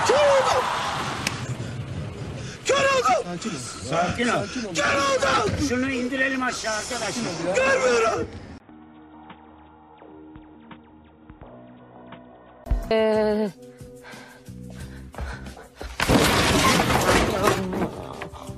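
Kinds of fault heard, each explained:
Input switched to a poorer device: at 8.58 s the sound drops out for about 20 ms, then returns duller, boxier and roughly 10 dB quieter, with nothing above 3.8 kHz and a faint new noise floor far below the signal. At 12.66 s the full, brighter sound comes back. The likely cause is the system switching its input mid-recording to a narrower-band microphone or a headset's call profile, then switching back.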